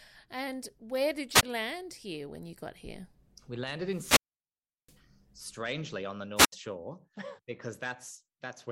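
Three wireless microphone squelch dropouts occur in this speech. At 1.33 to 1.43 s, after "and where did", the radio link fades and the receiver's squelch mutes the output for about 20 ms. A longer one runs from 3.88 to 4.99 s, after "got here we landed", with a mute of about 720 ms before "strangely on the". The last, at 6.36 to 6.52 s, right after "strangely on the", mutes for about 75 ms. Each is a short swell of hiss, then near silence, then the speech returns.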